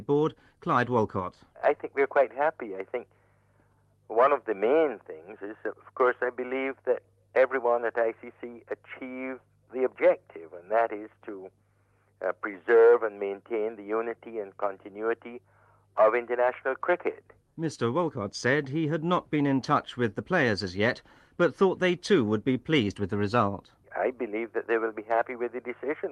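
No technical faults found.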